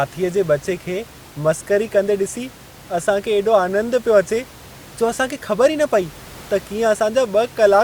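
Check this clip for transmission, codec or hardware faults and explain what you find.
Nothing to report on the transmission, codec or hardware side, and the only other thing audible is room noise sitting about 23 dB below the speech, which belongs to the recording environment.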